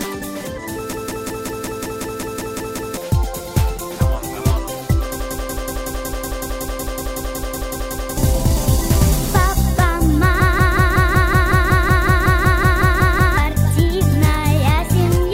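The system froze three times while the sound hardware kept replaying the same ring buffer, producing a system hang loop at 0.93–2.97 s, 5.20–8.17 s and 10.40–13.38 s. Each time, a 185.8 ms slice, which fits an 8192-sample buffer, repeats at 5.38 Hz as a machine-gun stutter. This replaces roughly two seconds of sound the first time and about three seconds in each of the later two.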